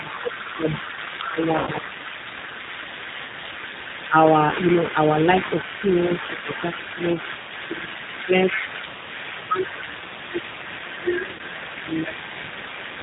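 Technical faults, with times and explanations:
Throughout, G.729 codec: the whole clip runs through this 8 kbit/s codec, which rebuilds speech from a vocal tract filter, a pitch predictor and a few pulses per frame, so it sounds plainly rough and synthetic, with nothing above 4 kHz.
1.21 to 1.91 s, 5.82 to 7.03 s and 7.62 s to the end, speech suppressed in double talk: the talker dips by up to about 10 dB, and up to about 15 dB in the last stretch, thinning or dropping out in pieces. It's likely an echo canceller turning everything down while both sides talked.
1.59 to 1.70 s and 11.33 to 11.42 s, VoIP packet loss concealed by the speech codec: about 80 ms and then 60 ms of audio went missing, which fits a few lost 20 ms packets each time. The decoder stretches the last sound into a fading buzz or coloured noise, and it stays weak briefly afterwards.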